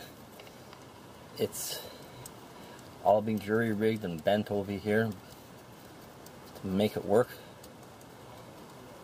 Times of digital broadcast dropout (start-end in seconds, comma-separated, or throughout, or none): none